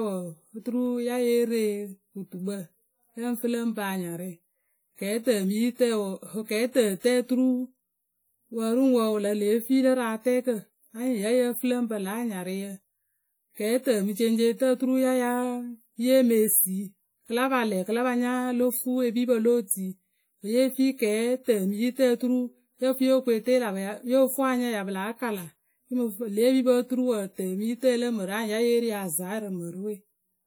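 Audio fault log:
throughout: WMA compression. The speech sounds washy and ringing, with a hiss that swells and fades along with the signal. This is likely a transform codec running at a low bitrate, near 48 kbps, smearing quantisation noise across each block and dropping weaker detail.
19.67 to 19.70 s: pre-echo. A brief hiss of about 33 ms comes just ahead of a sharp attack, which sounds softened. The codec spread noise meant for the loud onset evenly through its block, filling the quiet moment before it.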